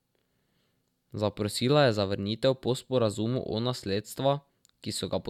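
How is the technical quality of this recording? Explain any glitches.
No glitches turn up in this one; there's nothing in the recording that stands out as a technical fault.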